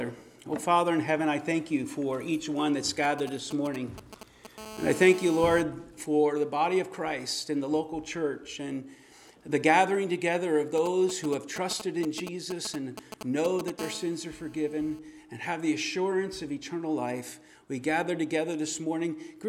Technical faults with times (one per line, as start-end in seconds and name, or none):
3.04-4.47 GSM signalling bursts
4.58-5.61 GSM phone buzz
10.78-13.70 GSM signalling bursts
13.79-14.99 GSM phone buzz